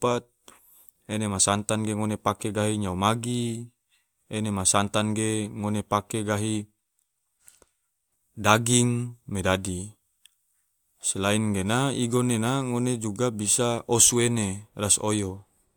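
No technical faults can be heard anywhere in the speech.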